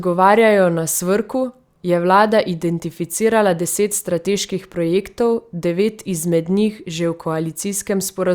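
Nothing in the recording stood out as a technical fault on listening.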